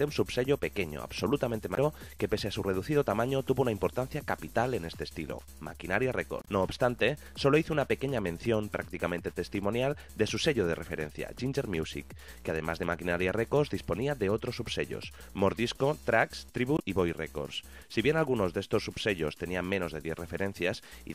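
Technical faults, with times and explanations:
1.74–1.78 s, 6.42–6.48 s and 16.76–16.80 s: damaged data in a compressed stream. Each short fault comes from the decoder misreading corrupted frames and resyncing at the next header.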